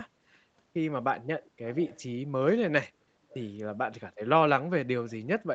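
From 1.7 to 2.03 s and again from 3.29 to 3.5 s, an echo leak is heard: a faint copy of the speech trailing about 0.42 s behind, roughly 20 and 25 dB down. This is likely a loudspeaker-side echo canceller letting residual pickup return.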